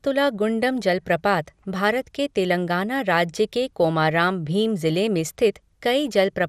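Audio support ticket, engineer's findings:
Speech dull and grainy for the full clip, with gurgling, granular distortion. Band-limited, nothing above 15.7 kHz. Likely MP2 compression: too few bits to spend across the 32 sub-bands, so upper bands drop out and the remaining bands are coarsely quantised. Damage fits roughly an 80 kbps encode.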